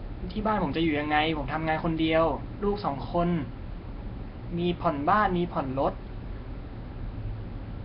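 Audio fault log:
throughout: Nellymoser compression. The speech has a rough, hissy halo and a smeared, underwater quality, with nothing above 5.3 kHz. The likely cause is heavy Nellymoser Asao coding at a rate near 22 kbps, where starved bands lose their detail and are refilled with noise.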